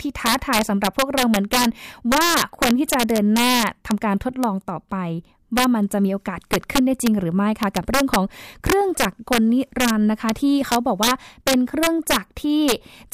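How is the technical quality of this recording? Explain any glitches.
The recording has one clear fault: integer overflow. Throughout the speech, the signal runs about 4 dB too hot, and each peak past the integer ceiling wraps to the opposite extreme instead of clipping. Under one percent of samples cross, but each produces a harsh, violent crack on loud syllables.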